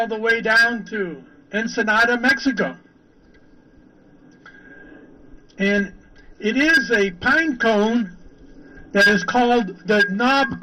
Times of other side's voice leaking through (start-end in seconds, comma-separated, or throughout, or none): none